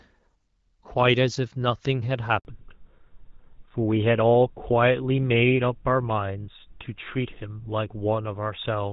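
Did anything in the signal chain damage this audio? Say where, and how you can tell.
Yes. At the network stage, a handover gap opens at 2.39 s: while the call switched between networks, no speech frames arrived for 60 ms. The sound drops away quickly and stays silent until 2.45 s, when the new link delivers audio again.

Immediately after, at 2.45 s, the codec stage shows a fallback to narrowband that lasts to the end of the clip. Before the gap, the speech has light HD Voice coding that fits AMR-WB at 12.65 kbit/s. Afterwards nothing above 4 kHz survives, so the speech sounds duller and rougher, consistent with GSM full-rate coding.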